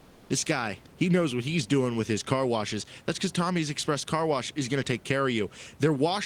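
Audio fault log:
0.00–0.29 s, comfort noise in place of the background: before "this guy he knows", the room background is replaced by a smooth, featureless hiss about 1 dB quieter, sitting about 29 dB below the loudest speech. The likely cause is discontinuous transmission, where the sender stopped sending during silence and the receiver filled the gap with synthetic noise. It differs from a dropout or gating because it never falls to true silence, and the real room noise's texture returns with the speech.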